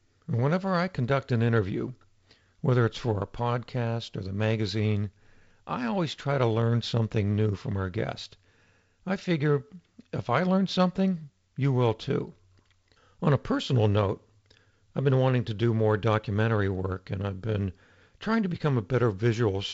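No faults are present; the speech carries the band limit of G.722 wideband telephone coding, with nothing above about 7.7 kHz and a slightly noisier lower band that fits the 48 kbit/s mode.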